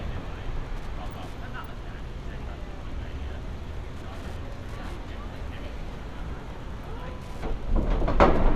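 A recording of sounds with Wi-Fi interference throughout. A steady tick repeats every 102.4 ms, about ten per second, roughly 30 dB below the sound. It comes from a nearby radio's beacon rectified by the audio circuit.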